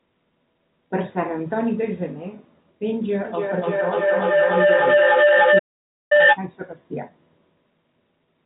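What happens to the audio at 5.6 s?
At 5.58 s the sound cuts out completely and stays silent until 6.12 s, about half a second. This is a playback stall, likely the player running short of data or being blocked. It differs from a packet-loss dropout in its length and clean, total silence with no concealment smearing.

The stall falls inside a feedback howl running from 3.25 to 6.45 s. The microphone-to-loudspeaker loop gains level on each pass, so the repeats build into a tone near 500 Hz, peaking about 10 dB above the speech and pulsing roughly every 300 ms at the loop delay. That rising, pulsing growth separates it from a steady interfering tone.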